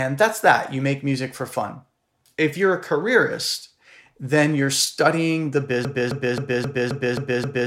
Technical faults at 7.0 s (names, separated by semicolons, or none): broken-record loop